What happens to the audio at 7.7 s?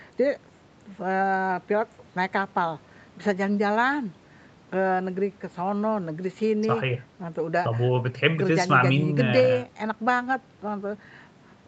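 Nothing goes wrong at 7.7 s: the speech carries on intact through that moment, with only the ordinary band-limiting of call microphone processing, which trims the lowest bass and leaves nothing above 8 kHz.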